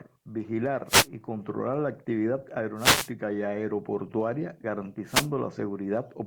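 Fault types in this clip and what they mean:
wireless microphone noise hit: brief bursts of static swish over the speech at 0.87–1.07 s, 2.76–3.11 s after "la actividad", and 5.06–5.29 s. Each marks a fade in the analogue FM radio link, where reflections cancel the signal and receiver noise rises through.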